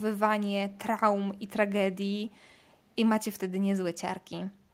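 Echo leak at 2.42 to 2.47 s and again at 2.90 to 2.96 s in this speech clip: brief, very faint scraps of the voice return about 408 ms late, likely from a far-end loudspeaker whose echo canceller let residual pickup through.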